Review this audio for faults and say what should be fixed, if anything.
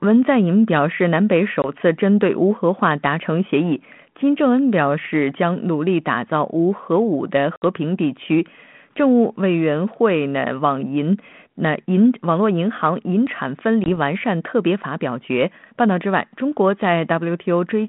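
Packet loss on an ADPCM call occurs at 1.62–1.68 s, 7.56–7.62 s and 13.84–13.97 s. Each is a hard-edged silent hole of 20, 60 and 20 ms respectively, roughly one, three and one packets. Speech then resumes with brief, slight distortion while the 32 kbit/s G.726 decoder's predictor and step size resynchronise with the sender's. To prevent it, carry redundant or forward-error-corrected packets and apply loss concealment that keeps the ADPCM decoder state aligned across gaps.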